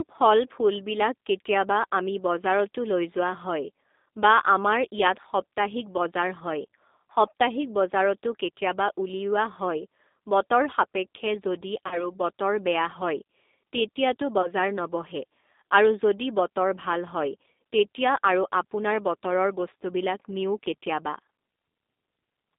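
Throughout, the speech carries G.729 codec damage: a roughened, slightly synthetic texture that points to a low-rate 8 kbit/s coder rebuilding each frame from a filter, pitch and a few pulses. A spectrogram shows energy confined to roughly 250 Hz to 3.7 kHz, with nothing above.

From 11.87 to 12.09 s, VoIP packet loss concealed by the speech codec stretches the sound into a fading buzzy tone or coloured noise. The 40 ms gap fits two lost packets. A spectrogram shows smeared, repeated harmonics, and the waveform's envelope decays before recovering slowly. A shorter 20 ms loss at 14.42 to 14.48 s does the same briefly.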